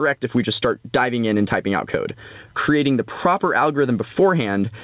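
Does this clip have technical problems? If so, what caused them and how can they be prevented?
Yes. Gain pumping runs through the whole clip, with the gain swinging by around 15 dB, leaving loud and soft passages squashed close together. The likely cause is an input gain set far too high for the microphone, so a fast limiter or compressor clamps down on every peak and releases in the gaps. Lowering the microphone gain until peaks no longer hit the limiter prevents this.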